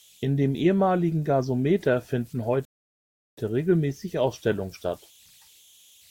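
Speech, and there are two things going on. Running through the whole clip you can pick up a faint whistle somewhere around 3 kHz, sitting about 32 dB below the speech, with a grainy edge under the quieter bits. Those are converter idle tones: an undithered delta-sigma converter settles into repeating bit patterns when the signal is small, and those patterns turn into audible pitched tones. Then at 2.65 s there's a rebuffering stall. The audio drops to silence until 3.38 s and then picks up exactly where it left off, so nothing's missing, but the player ran dry and added 724 ms of dead air while it waited for more data.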